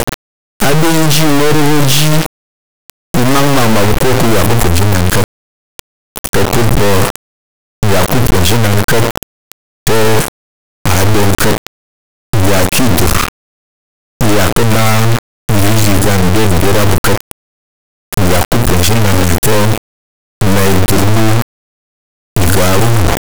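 From the first moment to the end, the speech is replaced by an extremely loud, harsh buzz like a square wave, slamming between silence and the clipping limit and falling silent in the quietest stretches. This is integer read as float: the sound points to 32-bit integer samples interpreted as 32-bit floating-point values, so each bit pattern becomes a meaningless number that is either near zero or far past full scale.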